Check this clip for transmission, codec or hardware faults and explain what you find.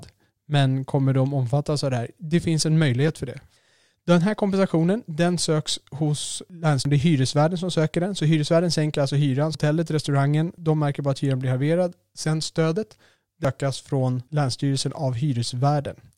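Three brief glitches interrupt the speech, at 6.85 s just after "kompensationen den söks hos", at 9.55 s between "hyresvärden sänker alltså hyran" and "restaurangen de märker bara", and at 13.45 s. These come from damaged data in a compressed stream: corrupted frames throw the decoder out of sync until it finds the next valid frame header.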